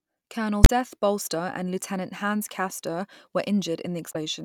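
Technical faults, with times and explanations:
0.64–0.70 s and 4.09–4.16 s: damaged data in a compressed stream. Each time, corrupted bytes make the decoder misread about 64 ms of frames, lose sync and hunt for the next valid frame header, so the speech briefly breaks into a chirp, squawk, click or short hole.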